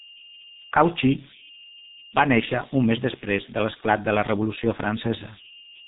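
A speech recording carries two faults that run through its whole length. The first is converter idle tones: a delta-sigma converter working without dither settles into repeating bit patterns on low-level input, and here those patterns produce a tone around 3 kHz, sitting about 18 dB below the speech. It is most exposed in the pauses, and under quieter passages it turns into a grainy, tonal noise rather than a smooth floor. The second is heavy G.723.1 codec damage. All content above 3.8 kHz is gone, so the speech sounds muffled and narrowband. The coarse, slowly updated vocal model leaves the voice hoarse and smears consonants together, a degree of damage that fits the codec's 6.3 kbit/s rate.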